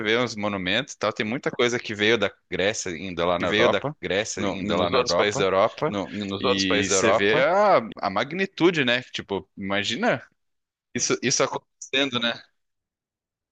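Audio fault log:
3.40 to 7.92 s, doubled audio track: a second, full-band copy of the speech sits around a second and a half behind the original at roughly the same loudness, so you hear everything twice with no decay or room colour on the echo. It cuts in and out abruptly at both ends, which points away from a real reflection. The likely cause is a slower second capture path or an edit leaving two copies out of step.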